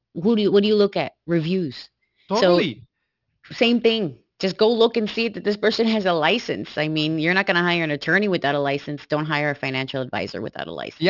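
Aliasing runs through the whole speech clip. The audio was resampled to a lower rate without an anti-aliasing filter first, which fits a drop to 12 kHz. Energy above the 6 kHz fold point mirrors back below it as false, unrelated tones, roughly 20 dB under the speech, so sibilants sound gritty and metallic. Plain band-limiting would just dull the top end. Here the spectrum stays bright right up to 6 kHz and then stops abruptly.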